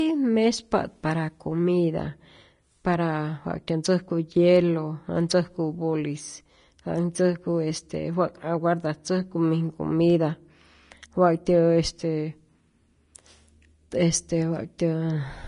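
From start to finish the speech carries hissy, grainy treble, with nothing above 10.6 kHz, most likely from Vorbis compression at a low bitrate, around 33 kbps. Coarsely quantised residue turns fine detail into noise. A spectrogram shows a hard ceiling and speckled high bands.

At 14.78 s a pre-echo appears: noise sized for a sharp attack spreads backward through its transform block, so a short hiss of about 10 ms leads the onset and softens it. A waveform shows a fuzz just before the transient.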